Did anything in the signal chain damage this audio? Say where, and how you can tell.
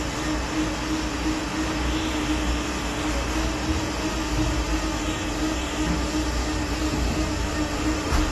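Yes, at the codec, throughout. Nothing sounds above 12.1 kHz, and the damage is plainly audible. The sound fits AAC compression, likely AAC-LC near 32 kbps, discarding the top band.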